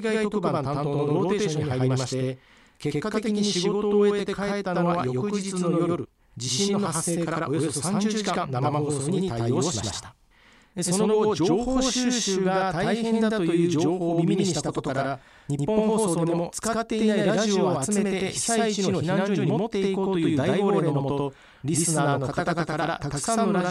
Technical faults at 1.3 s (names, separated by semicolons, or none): channel delay (doubling)